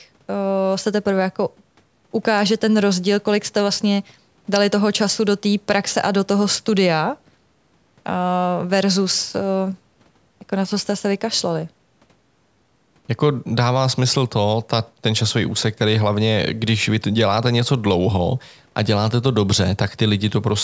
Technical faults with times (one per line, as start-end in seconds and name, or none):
none